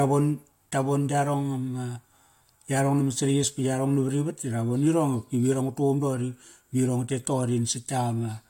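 No technical faults can be heard anywhere in the recording.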